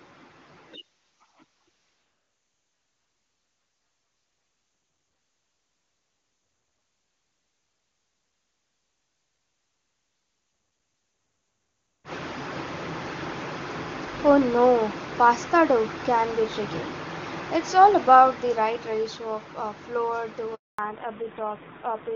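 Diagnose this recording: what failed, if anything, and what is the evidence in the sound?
At 20.55 s the speech fades out within a few tens of milliseconds and stays silent for about 240 ms, returning at 20.79 s. This is a handover gap at the network stage. The call switched from one link to another, no speech frames arrived during the switch, and that stretch of speech is lost.

From 20.79 s to the end, the speech turns duller and rougher, and nothing is heard above 4 kHz. Before this point the audio has the clear top end of high-rate AMR-WB. This is a fallback to narrowband at the codec stage. Right after the handover the call dropped out of HD Voice to a low-rate narrowband codec, which fits AMR-NB at around 7.4 kbit/s.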